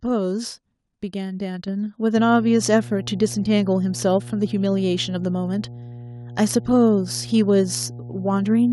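A speech clip with two faults. At 1.68 s the microphone volume steps up by about 5 dB. Voice and background jump together, as the call software raised the input gain in one step. From 2.17 s to the end, a steady 60 Hz mains hum sits well under the speech. It is a low, constant tone from the power line, leaking in through a ground loop or nearby transformer.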